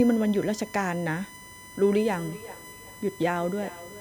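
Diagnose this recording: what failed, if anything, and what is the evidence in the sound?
USB whine runs under the whole clip: a steady tone at 1 kHz with its strongest part at 2 kHz, roughly 20 dB below the speech. That's analogue wiring, with the USB bus's 1 ms frame current leaking in through the power or ground and putting a fixed pitch on the line.

Feedback echo between two devices kicks in at 2.06 s and lasts to the end. The speech comes back roughly every 400 ms, peaking about 18 dB under the original. That's a call-processing problem: a second device in the room replays this mic, and it gets picked up again, which this side's echo canceller can't remove.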